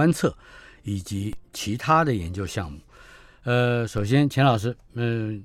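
At 1.33 s and again at 3.98 s, the speech carries a DC step: the waveform's zero line jumps by about -24 dBFS, then drifts back as a 5 Hz high-pass bleeds the offset away. Each jump registers as a brief low thump beneath unchanged speech.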